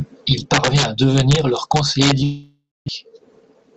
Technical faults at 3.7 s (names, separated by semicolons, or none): gain pumping; jitter buffer speed-up